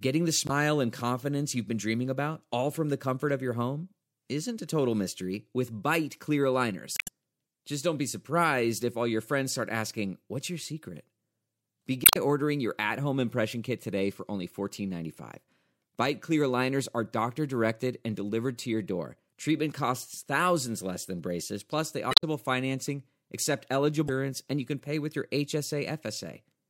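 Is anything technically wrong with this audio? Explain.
Yes. The speech has damaged data in a compressed stream at 0.46–0.51, 6.94–7.08, 12.03–12.17, 22.10–22.24 and 24.05–24.10 s. Corrupted bytes make the decoder misread frames and lose sync. It then hunts for the next frame header. Each spot sounds like a brief chirp, squawk, click or short hole.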